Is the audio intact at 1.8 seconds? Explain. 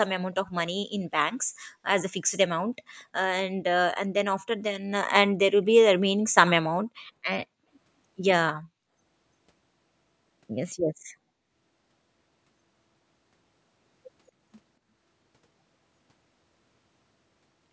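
No, just before it: from 1.68 to 1.79 s the background is gated by the echo canceller, which ducks the room sound about 24 dB while the far end plays and then releases. It differs from a dropout because only the ambience dips, recovering right at 1.8 s.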